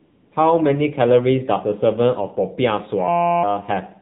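Speech runs through an AMR narrowband mobile codec for its whole length, and the damage is plain: nothing above 4 kHz survives, and the voice has the buzzy, synthetic edge of a vocal-tract model driven by too few pulses, which points to a low AMR-NB rate around 7.4 kbps. That buzz is what separates it from an ordinary band-limited telephone line, which would sound muffled but still natural. From 0.0 to 0.32 s there is AMR comfort noise. The phone treated the opening as silence and sent no speech frames, so the receiver filled the gap with smooth, steady synthetic hiss built from a rough level and spectrum. It differs from a real room background because it is unnaturally even and switches off abruptly when speech frames resume, rather than continuing under the voice. From 3.08 to 3.43 s a system hang loop takes over. The machine froze while the sound hardware kept replaying the same 5.8 ms slice of its ring buffer, which fits a 256-sample buffer. 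Repeated dozens of times, that slice becomes a steady buzz at 172 Hz. Unlike codec warble or a dropout, the tone is rigidly fixed in pitch and exactly repetitive, and roughly four-tenths of a second of real audio is lost under it.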